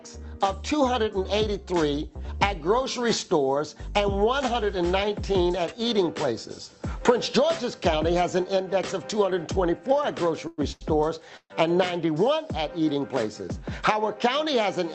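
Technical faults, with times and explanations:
10.47 to 10.60 s, call audio freeze: for about 105 ms the sound turns into a held buzz that fades, and then carries on exactly where it left off with nothing lost. The likely cause is delayed packets draining the jitter buffer while the receiver extended the last sound. On a spectrogram this shows as smeared, horizontal, repeated bands below the 8 kHz ceiling of the call codec. The waveform shows a periodic, decaying stretch.
10.72 to 10.83 s, short stall from a late packet: a packet arrived late, so the receiver stretched the current sound by about 89 ms and then resumed from the same point. The result is one sound held unnaturally long, with a slight buzz or dip. Nothing is skipped. The spectrogram shows a brief frozen, striped patch, and the waveform shows a short run of near-identical cycles.
11.37 to 11.52 s, call audio freeze: this is a longer hold of about 132 ms. 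The held buzz decays and then drops to silence for about 70 ms before the sound resumes intact, likely because the jitter buffer ran dry again while packets were held up in transit. On a waveform this appears as a fading repeated segment followed by a flat gap. The spectrogram shows striped, smeared energy ending in a dark vertical blank.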